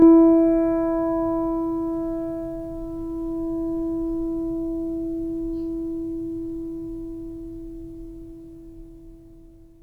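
Channel delay (comb filtering) runs through the whole piece of music. One channel lags the other by around 20 ms, and summing to mono cancels shared content at evenly spaced notches starting near 20 Hz, leaving the music rough and slightly doubled.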